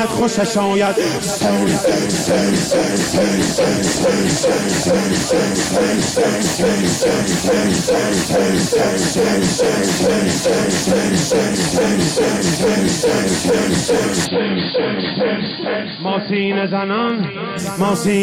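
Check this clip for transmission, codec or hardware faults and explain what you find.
One fault is present. From 14.25 to 17.59 s, nothing above 4.8 kHz and a faint new noise floor appear, likely from the input switching to a poorer device, so the sound dulls without a gap or level jump.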